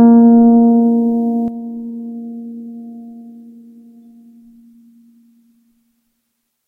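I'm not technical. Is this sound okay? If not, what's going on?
No, there's a problem. At 1.48 seconds the music suddenly gets noticeably quieter, and it stays at that lower level right to the end. That's called a sudden gain jump. The volume drops in a single instant instead of fading down smoothly, and any background hiss drops along with the music. The likely cause is a volume setting being changed in the digital audio without a gradual ramp, so the level simply switches.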